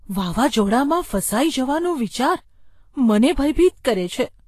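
Low-bitrate Vorbis compression is the likely cause of the damage across this speech clip, at a rate that sounds near 34 kbps. The encoder has removed everything above 14.2 kHz and coarsely quantised the remaining treble, so consonants come out hissy and grainy and attacks are blurred throughout.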